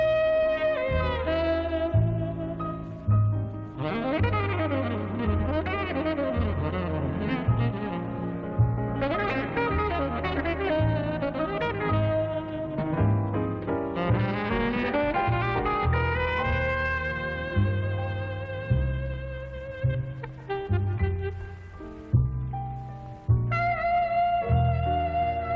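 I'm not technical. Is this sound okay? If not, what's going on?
Yes, it's fine: it sounds like it came through an ordinary internet call, which naturally trims away the very top of the sound above 8 kHz, and there's nothing wrong to worry about.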